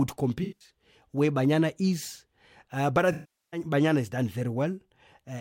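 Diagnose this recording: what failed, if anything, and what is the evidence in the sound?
AAC frame loss with concealment: the decoder rebuilt missing frames from the last good spectrum. Scattered gaps (about 170 ms lost) smear 0.43–0.70 s into phasey patches. After "but I", a 405 ms run at 3.12–3.6 s fades toward silence before "has done".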